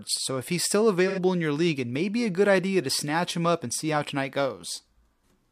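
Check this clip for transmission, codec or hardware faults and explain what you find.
One fault is present: AAC frame loss with concealment, from 1.07 to 1.19 s. For about 85 ms, which fits two lost frames, the decoder rebuilt the missing audio from the last good spectrum. The gap sounds smeared and noisy rather than silent, unlike a plain dropout.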